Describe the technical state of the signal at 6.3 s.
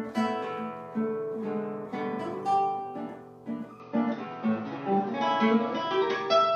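Input switched to a poorer device, in effect from 3.80 s through the end of the clip at 6.56 s, so 6.3 s sits inside it. From 3.80 s the band stops near 6.2 kHz, the level shifts by a few decibels, and a faint new noise floor, around 50 dB under the signal, appears. The change comes with no gap. This most likely reflects the input jumping to a narrower-band microphone or headset profile, leaving the sound duller and boxier.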